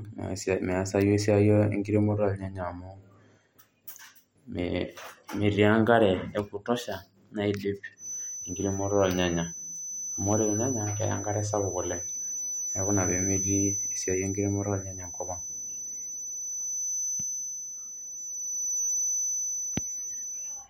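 From 7.95 s, just after "e kutosha naidip", a thin, single-pitch 6 kHz feedback whistle that slowly swells and fades sits a few dB under the speech until the end, likely from a loudspeaker-to-microphone loop held at the edge of feedback.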